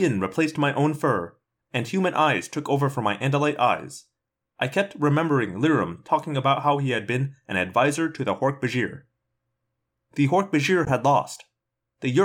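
A speech clip with a short hole from 10.85 to 10.91 s: the sound cuts out, then resumes as if it had kept playing. This is likely a Bluetooth dropout, with late packets discarded. A spectrogram shows a narrow blank vertical band, and the waveform a flat gap.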